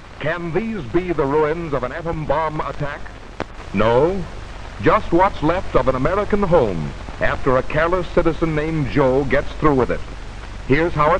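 At 3.58 s there's a sudden gain jump: the level steps up by about 5 dB in one go and stays there to the end, background noise rising right along with the sound. It's most likely a gain change applied instantly, with no ramp.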